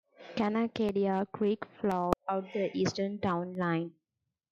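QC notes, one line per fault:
0.89–3.55 s: periodic USB or driver dropouts, about four brief silent gaps of roughly 1 ms every 1.02 s, heard as regular ticks while speech plays.
2.13 s: damaged data in a compressed stream, decoder loses frame sync on corrupt bytes and resyncs.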